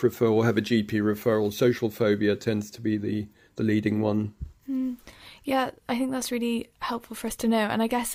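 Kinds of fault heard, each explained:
No technical fault can be heard anywhere in this speech recording.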